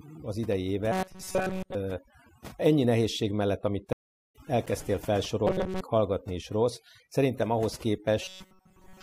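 Overdone noise removal runs throughout: bands near the noise floor are gated off, leaving a black spectrogram background with scattered specks.

From 0.92 to 1.75 s a rigid metallic buzz at 188 Hz appears, likely from repeating short buffers of about 5.3 ms, shown as evenly spaced harmonic stripes.

After "ennyi nehézség mellett amit", a stream reconnect leaves a flat-line gap from 3.93 to 4.36 s, then the speech resumes about half a second further on.

The same 188 Hz buzz returns from 5.47 to 5.81 s before "hallgatni is rossz szerintem", and from 8.22 s to the end, after "is rossz szerintem ahhoz".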